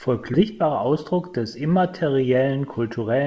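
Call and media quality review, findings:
Skip ahead, 0.34–0.36 s: roughly 0.7 s of queued speech dropped; playback jumps forward with no gap, sides spliced directly.

Jitter buffer speed-up, 0.51–1.42 s: overfilled buffer trimmed pitch-period pieces, about a tenth of a second in total; speech runs about 9% faster at unchanged pitch, sounding hurried. Band-limited to 8 kHz, consistent with G.722.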